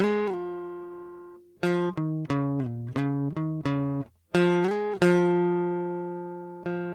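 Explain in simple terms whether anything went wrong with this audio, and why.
Nothing went wrong here: the music plays through the whole way, with no breaks, jumps or sudden changes in the sound that would point to a technical problem.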